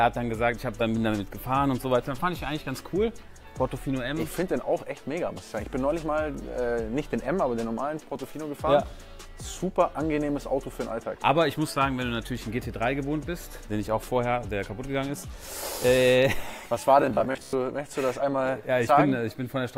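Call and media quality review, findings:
Robotic sound from repeated short buffers, 17.02 to 17.53 s. Rigid metallic buzz near 66.8 Hz, fitting a repeated 15 ms buffer. Roughly half the audio replaced by repeats. Likely cause: input starvation, with the playback loop refilling from its last buffer.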